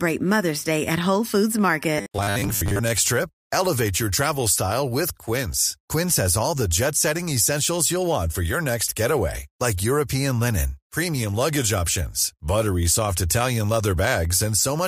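A speech clip with robotic sound from repeated short buffers between 1.98 and 2.80 s: about half the audio is replaced by loops, likely of a 10 ms buffer. A rigid 100 Hz buzz results, unlike codec warble.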